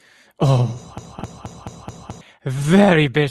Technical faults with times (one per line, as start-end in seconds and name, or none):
0.98-2.21 broken-record loop
1.19-1.21 skip ahead
2.38-3.19 jitter buffer speed-up